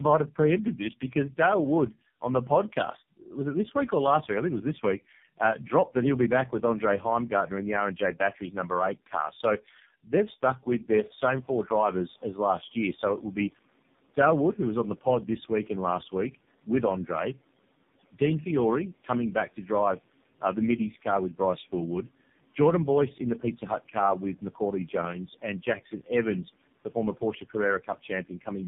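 Throughout, the speech shows tandem speech coding. It was decoded and re-encoded at each codec border, and the sound suggests three low-rate speech coders in a row. Nothing reaches above 3.7 kHz. The speech sounds muffled, rough and warbly, worse than any single coder would make it. The room noise rises by about 23 dB around 11 seconds and stays about 26 dB below the speech.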